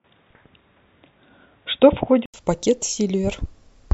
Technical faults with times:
0.00-2.34 input switched to a poorer device

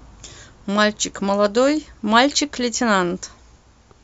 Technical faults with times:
1.01 block of digital silence

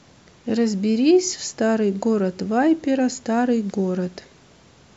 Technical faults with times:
none

